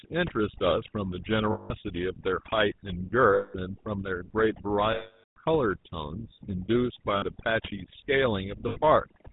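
From the start, overdone noise removal has pulled the background down. Twinkling specks remain. The reduction was set too hard, so it pulled down frequency bands close to the noise estimate. Quiet parts of the speech went too.

Also throughout, the GSM full-rate codec is plainly audible. The bandwidth stops at 4 kHz. The speech has a buzzy, gravelly roughness from the pulse-driven vocal tract model. This fits a 13 kbps GSM full-rate stream.

Lost GSM frames occur at 1.52 s for 180 ms, at 3.34 s for 200 ms, at 4.92 s for 440 ms, at 7.16 s for 60 ms and at 8.68 s for 80 ms. Each gap is filled by repeating the last good frame. This gives a rough, metallic ring. The 440 ms loss is cut to silence before the audio returns.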